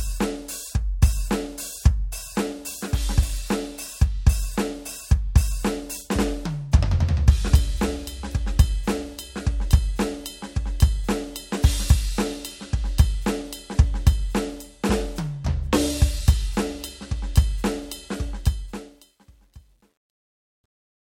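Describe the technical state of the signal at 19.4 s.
At 19.4 s you're in the truncation distortion on the fade-out, which runs from 18.31 s to the end at 21.01 s and is worst after 19.12 s. The fade nears the smallest of the few undithered level steps left, consistent with an 11-bit stage, so the music turns gritty.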